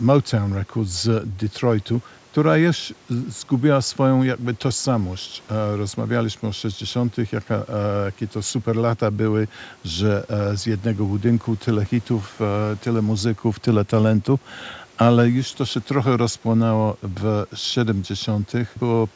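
No technical faults are audible.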